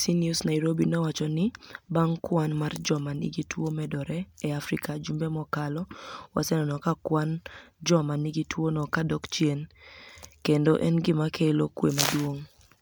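Speech throughout the clip shows generation loss: the sound is swirly, smeared and hollow, with blurred consonant attacks and a watery texture that a single MP3 pass at this quality would not produce. The spectrum stops at 20.1 kHz, which fits 128 kbit/s MP3. The likely cause is repeated decoding and re-encoding, about four times, each pass quantising on a shifted frame grid so that noise and spectral holes pile up.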